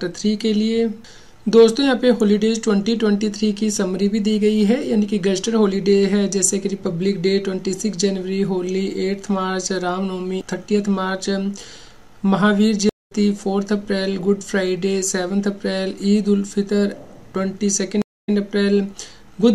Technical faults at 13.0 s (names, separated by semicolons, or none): stream reconnect